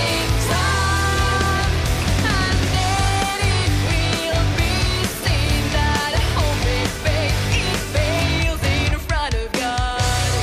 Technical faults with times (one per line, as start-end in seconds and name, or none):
0.31-10.28 periodic USB or driver dropouts